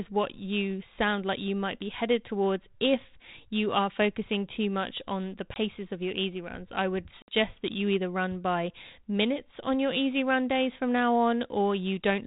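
Speech carried over a G.726 ADPCM link at a rate consistent with 32 kbit/s, with no sound above 4 kHz, suffers packet loss on an ADPCM call. About a packet's worth (20 ms) vanishes at 5.54 to 5.57 s, between "too much on the" and "of your easy runs". A few packets (60 ms) go at 7.22 to 7.34 s, between "easy runs I would" and "that you either run". Each gap is a hard-edged silence. The decoder's predictor and step size then lose track of the sender's, so the sound resumes with brief, slight distortion.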